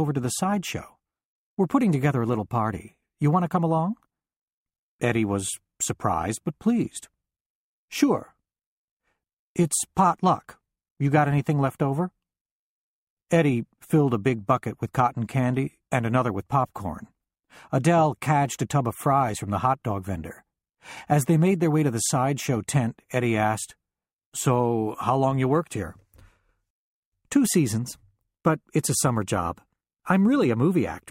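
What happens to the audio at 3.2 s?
Nothing goes wrong at 3.2 s; the audio plays through that moment intact, with no dropout, click or other fault.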